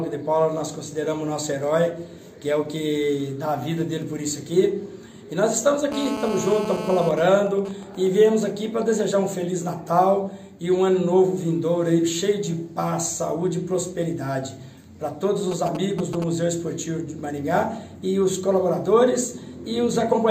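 From 5.92 to 7.09 s a hard, raspy buzz at 217 Hz with dense harmonics sits about 8 dB under the sound: GSM phone buzz, a nearby phone's call transmissions rectified by the audio circuit. It gives way from 7.11 to 8.07 s to even ticks with a longer 217 Hz buzz twice a second, and again from 15.5 to 16.2 s to a galloping dit-dit-dit of short 217 Hz buzzes. These are GSM signalling bursts, short groups of radio pulses, first as the phone's user falls silent mid-call and later as plain signalling, quieter at first and louder the second time.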